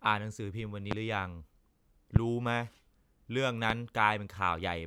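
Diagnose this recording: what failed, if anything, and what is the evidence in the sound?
Loud pops at 0.91, 2.16 and 3.70 s rise about 20 to 25 dB above the speech, which continues beneath them, unlike a dropout. The likely cause is voltage pulses in the analogue wiring.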